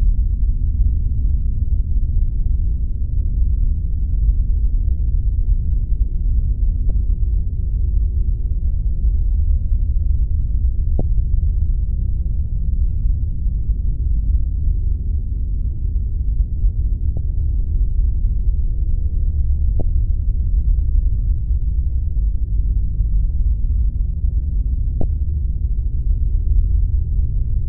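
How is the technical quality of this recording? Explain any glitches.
The recording has five brief glitches from damaged data in a compressed stream, at 6.87 to 6.91 s, 10.97 to 11.01 s, 17.17 s, 19.78 to 19.81 s and 25.00 to 25.03 s. Corrupted bytes make the decoder misread frames and lose sync until it finds the next frame header, leaving a momentary chirp, squawk, click or short hole in the sound, each about 30 ms or shorter.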